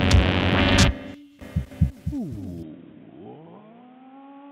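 At 2.63 s the audio abruptly turns dull and boxy and stays that way to the end, with nothing above 3.8 kHz, a level drop of roughly 10 dB and a new background noise sitting around 30 dB under the signal. There is no silence at the change. The likely cause is an input switched to a poorer device. A simple low-pass filter or codec bandwidth drop would not also shift the level and bring in a fresh noise floor at the same instant.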